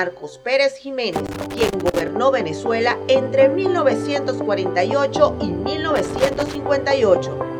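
Loose connector crackle bursts from 1.13 to 2.08 s and again from 5.96 to 6.55 s. A worn contact intermittently breaks the signal, producing irregular scratchy crackle.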